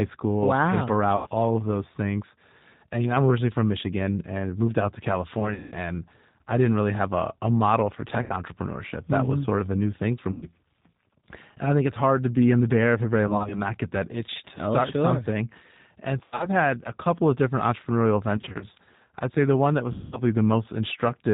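G.729 coding runs throughout the clip at 8 kbit/s, which fits the G.729A variant. The speech is rebuilt from a vocal tract filter, a pitch predictor and a few pulses in each 10 ms frame, so nothing above 4 kHz survives. The voice stays intelligible but sounds plainly rough and synthetic, with a thin, muffled top.

VoIP packet loss concealed by the speech codec occurs eight times: at 1.16 to 1.27 s (about 100 ms missing), 5.40 to 5.76 s (200 ms scattered over 320 ms, the longest gap 180 ms), 8.22 to 8.36 s (80 ms), 10.32 to 10.49 s (100 ms), 13.27 to 13.62 s (80 ms in short 20 ms dropouts over 240 ms), 16.24 to 16.48 s (120 ms over 160 ms, longest 80 ms), 18.37 to 18.66 s (120 ms in 20 ms dropouts over 240 ms) and 19.92 to 20.23 s (200 ms). In each gap the decoder keeps repeating its last pitch and filter settings while lowering the gain. This stretches the sound into a fading buzzy tone or coloured noise. 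The longest unbroken runs are near 5.4 s and 19.9 s. Each frame builds on the previous one, so the voice stays weak and distorted briefly after the audio returns.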